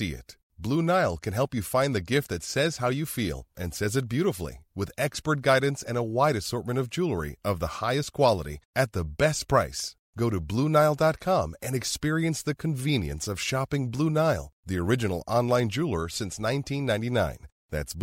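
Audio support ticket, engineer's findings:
Skips in speech at 5.88 s and 11.87 s, 6 s apart. Likely audio missing between chunks: a few milliseconds cut, sides joined without silence, unlike a silent dropout.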